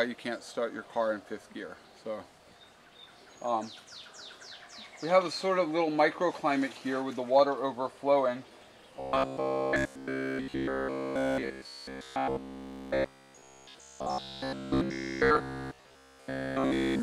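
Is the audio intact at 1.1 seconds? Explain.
Yes, at 1.1 seconds the audio plays through cleanly, with no dropout, click, distortion or other fault at that moment.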